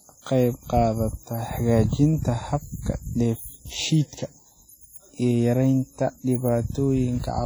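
From start to finish the speech carries heavy transform-coding damage. Consonants ring and smear, and vowels sound washy rather than clean. A hiss rises and falls with the speech, swelling on loud syllables and thinning in pauses. Quiet detail drops in and out. This is likely WMA compression, with long transform blocks spreading quantisation noise over tens of milliseconds. The damage fits a low bitrate of around 32 kbps.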